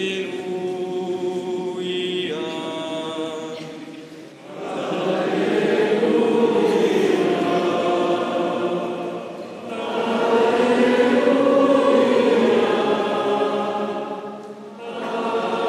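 Faint, evenly spaced ticks, clock slip clicks, run through the sound from 0.14 s to 15.67 s, roughly every 0.15 s. Likely unsynchronised clocks about 200 ppm apart drop or repeat single samples, showing as thin vertical lines on a spectrogram and tiny waveform steps.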